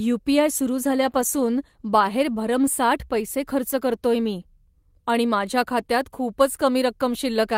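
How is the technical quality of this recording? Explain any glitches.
The quality dips once, from 0.92 to 2.73 s, where the speech turns rougher and muffled, with a watery, smeared edge. It is at its worst for 1 s before clearing. This is a call bitrate drop: the connection's bandwidth estimate fell and the encoder had to spend far fewer bits, coding more coarsely and trimming the top end. The change in detail fits a fall from 32 to 16 kbps.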